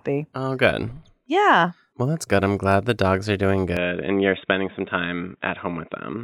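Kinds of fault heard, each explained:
Input switched to a poorer device: from 3.77 s to the end the speech turns dull and boxy, with nothing above 3.8 kHz, and a faint new noise floor appears, at no gap or level jump. This likely comes from the input moving to a narrower-band microphone.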